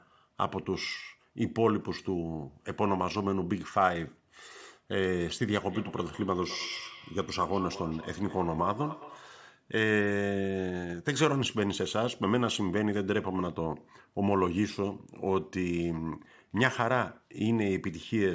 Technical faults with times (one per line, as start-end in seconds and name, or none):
5.66-9.42 feedback echo between two devices